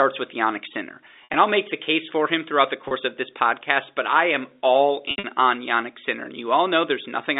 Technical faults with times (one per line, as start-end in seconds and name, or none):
1.24-1.34 packet loss with pitch repetition
2.88-2.91 packet loss with pitch repetition
5.08-5.24 packet loss with pitch repetition